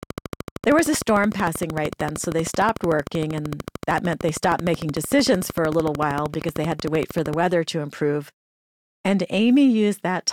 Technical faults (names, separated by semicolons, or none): train of clicks